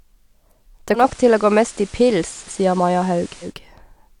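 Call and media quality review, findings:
Digital radio blending to analogue, 0.93–3.55 s: digital dropout, 135 ms cross-fade to FM and back; hiss about 25 dB below signal, level about 2 dB down.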